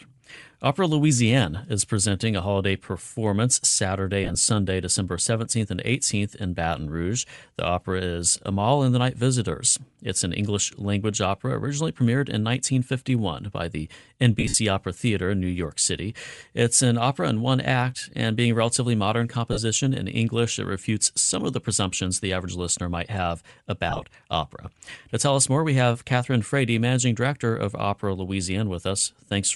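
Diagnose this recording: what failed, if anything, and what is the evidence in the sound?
Bluetooth LC3 compression, throughout the clip: the speech has a plainly audible breathy, grainy edge, with upper-band detail replaced by noise. The cause is likely an LC3 codec stage running at a modest rate, consistent with about 48 kbps and 7.5 ms frames.

Lost LE Audio frames at 4.24–4.35 s, after "by the" at 14.40–14.57 s, after "relatively modern" at 19.53–19.59 s, and after "average listener might have" at 23.90–24.04 s. On the wireless link, the decoder concealed each gap by reusing the last spectrum with random signs, leaving a noisy smear. The 14.4 s gap is longest.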